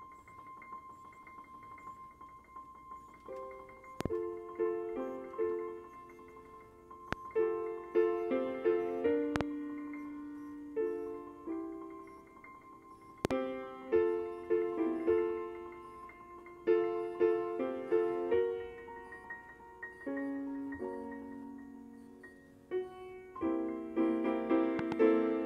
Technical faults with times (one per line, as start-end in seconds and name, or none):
4.01-4.08 loud pop
7.13-7.15 loud pop
9.36-9.43 loud pop
13.25-13.33 loud pop
24.79-24.94 loud pop